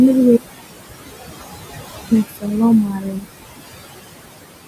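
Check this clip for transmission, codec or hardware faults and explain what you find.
Both problems come from the noise suppressor. Noise suppressor artifacts run through the whole clip. The room noise sits about 10 dB under the speech, and the suppressor pulls it down by about 19 dB between phrases. The background pumps in and out.

Speech cut by the noise suppressor happens from 2.28 to 2.45 s and from 2.89 to 3.42 s. The suppressor treated quiet speech as noise and dropped it by about 20 dB, so those parts sound swallowed and faint.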